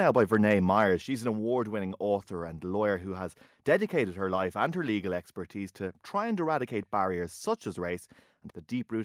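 From 0.17 to 0.35 s the loudest peaks are flattened, adding a harsh crackle; this is likely microphone overload, with input about 1 dB past the converter limit on a small fraction of samples.

At 1.02 s the whole signal, background included, drops by about 4 dB at once, likely the microphone volume stepped down by software reacting to that clipping.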